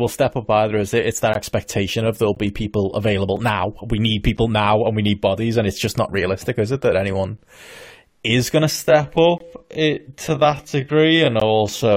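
Short holes of silence cut into the speech at 1.34, 2.35 (between "that expectation of there'll" and "be people available now"), 3.36, 4.37, 7.38, 9.38 and 11.40 s. These are gaps between stream segments, spaced about one second apart, which fits one-second segments whose time stamps leave room the player fills with silence. Each lasts about 5 to 21 ms. On the waveform they are flat, hard-edged dropouts, and on a spectrogram they are thin, fully blank vertical stripes.

From 8.68 s after "is going to" to the end, the pace abruptly slows to about 0.61 times normal while the pitch holds, which points to a time-stretched section. The audio drags. A spectrogram shows stretched harmonics.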